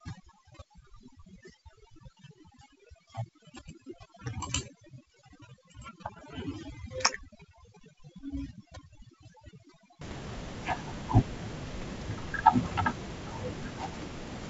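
Speech, with overdone noise removal from the start to about 10.01 s. The noise reduction is set far too hard for a room noise floor sitting only about 14 dB below the voice. Frequency bands near its noise estimate are pulled down or switched off, taking quiet parts of the voice with them, so the background drops and breaks up into twinkling specks. The G.722 wideband coding is audible as the band stopping near 7.7 kHz.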